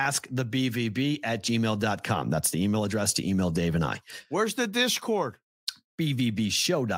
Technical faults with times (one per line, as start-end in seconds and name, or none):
none